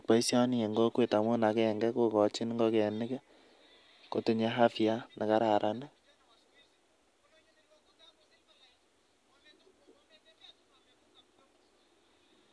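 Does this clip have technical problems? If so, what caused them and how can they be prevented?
No, this clip has no technical problems, so there is nothing to trace to a cause or prevent.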